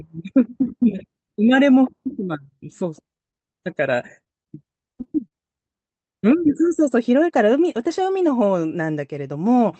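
From 3.17 to 3.56 s the speech turns choppy: this is repeated packet loss, with four holes, none longer than about 18 ms, arriving in quick succession. Each is patched by extending the preceding sound, so roughly 15% of that stretch is synthetic continuation rather than real speech.

Short concealed packet loss then follows as isolated events at 4.24–4.28, 4.44–4.48, 4.98–5.01, 5.03–5.07 and 5.28–5.33 s. Each drops about 20 ms of audio, which fits one lost 20 ms packet, and the last drops about 40 ms, or two packets. Each is heard as a single brief smear or wobble, not a sustained robotic texture. The Opus call path is audible as speech limited to about 8 kHz.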